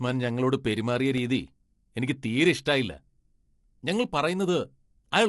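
From start to finish the speech sounds rough and grainy, and the damage is plainly audible. The likely cause is low-delay AAC compression (AAC-ELD) at a rate that fits about 32 kbps. Its short frames capture pitch harmonics poorly, so noise fills the gaps between them. On a spectrogram the harmonic stripes look smeared, with speckled energy between them, and nothing appears above 11.6 kHz. The waveform alone shows little of this.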